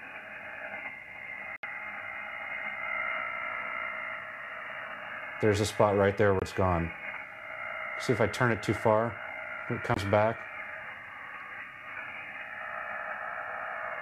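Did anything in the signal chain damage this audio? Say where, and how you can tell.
Yes. The damage is most likely a Bluetooth dropout on the wireless link to the headphones, where audio packets arrived too late and were discarded. The output falls abruptly silent from 1.56 to 1.63 s (about 70 ms), then at 6.39 to 6.42 s and 9.94 to 9.97 s (about 23 ms each). Each time the sound resumes further along, as if it had kept playing, and the durations fit three lost packets and then one each.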